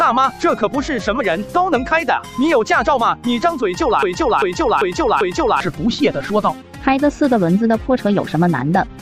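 From 4.03 to 5.6 s, a fragment of about 0.39 s repeats exactly, back to back, four times, like a broken-record loop. The likely cause is a stalled player, encoder or stream resending its last held piece, so the audio due in that span is lost.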